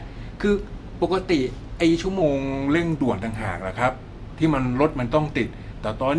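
From 2.22 s to the end of the clip, the speech turns slightly low and sluggish, running at about 0.92 times normal speed with its pitch dropped by roughly 1.5 semitones. This is a wrong sample rate fault: the samples are clocked out more slowly than they were captured, with no conversion, so timing and pitch shift together by the same ratio. That ratio fits audio recorded at 24 kHz being played back at 22 kHz.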